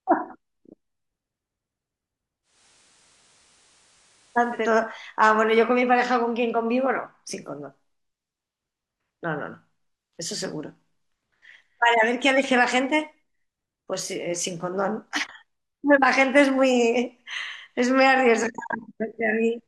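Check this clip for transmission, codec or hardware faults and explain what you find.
One fault stands out in this speech clip. Digital radio blending to analogue occurs from 2.42 to 4.74 s: the receiver lost its digital stream and cross-faded, over 220 ms at each end, to the same station's FM signal, then blended back. During that stretch the level drops by about 1 dB, and a faint hiss sits well beneath the speech until the digital audio returns.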